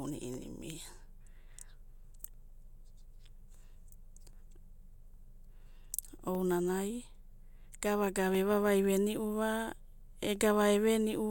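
From 0.34 s to about 10.36 s the speech is punctuated by small, evenly spaced ticks, one every 2.0 s, roughly seven in all, each audible only because sound is present when it lands. These are periodic USB or driver dropouts: something stalls the USB bus or audio driver on a fixed cycle, and each time around a millisecond of audio goes missing and is replaced by silence, leaving a sharp gap in the waveform.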